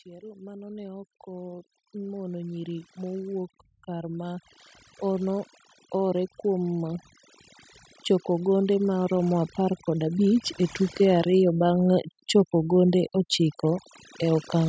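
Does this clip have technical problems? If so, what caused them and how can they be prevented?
Yes. The noise removal was overdone throughout: the noise reduction was set far too aggressively, so any frequency band sitting near its noise estimate was pushed right down or switched off, and the quieter parts of the speech were removed along with the noise. The background drops and breaks up into twinkling specks. To prevent this, use a gentler reduction setting or reduce the noise at the source before recording.

There are also two episodes of automatic gain rising. The automatic gain control judged the input too quiet and gradually raised its gain, lifting voice and background together. The first swell runs from 0.05 to 7.06 s and climbs about 13 dB. The second runs from 8.25 to 11.34 s and adds about 6 dB. Both are slow enough to hear as a gradual rise rather than a jump. To prevent this, set a proper input level so the control has no reason to keep boosting, or turn the automatic gain off. 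The call's microphone processing, which keeps nothing above 8 kHz, is working as intended and is not one of these faults.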